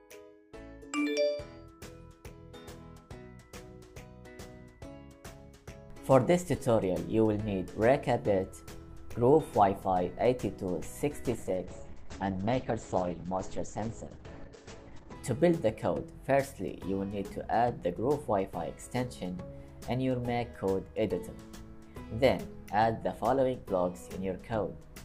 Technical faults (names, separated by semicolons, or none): call bitrate drop